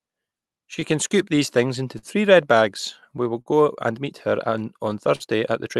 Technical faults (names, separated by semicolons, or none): clock drift between sender and receiver; scattered short gaps; short stall from a late packet